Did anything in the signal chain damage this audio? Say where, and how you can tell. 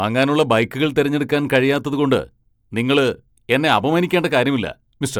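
No, nothing in the signal chain damaged this audio.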